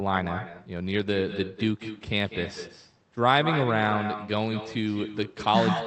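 From start to finish the speech carries echo with no canceller. Each phrase is followed, around a fifth of a second later, by a weaker copy sitting about 10 dB down, thinner than the original. The far end is playing the call through a loudspeaker, its microphone captures that playback, and nothing subtracts it before it returns across the network, so the talker's own audio arrives back as a trailing shadow.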